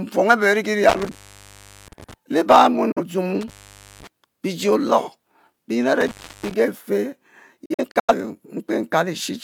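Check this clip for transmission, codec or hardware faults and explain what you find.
Two kinds of fault are present: a loose connection in the analogue path and dropouts in a digital broadcast chain.

Intermittent contact occurs at 0.89 to 2.14 s, 3.41 to 4.07 s and 6.01 to 6.54 s. A cable or plug briefly opens, so the speech cuts out with crackle at each edge for about 730, 506 and 322 ms, leaving faint hiss while the line is open.

Digital broadcast dropout comes at 2.92 to 3.02 s and 7.65 to 8.14 s. The receiver lost valid frames and muted until clean ones returned. The first is a single 43 ms hole with an 8 ms fade. The second is several holes scattered over 427 ms, totalling 213 ms with the longest 85 ms, which fits roughly five lost frames.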